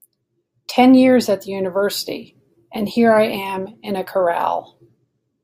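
Nothing goes wrong anywhere in this short bit of speech, so there's no fault to point to at any moment.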